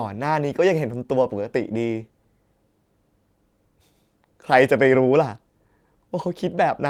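No technical faults can be heard anywhere in the recording, and the signal stays continuous and steady from its first moment to its last.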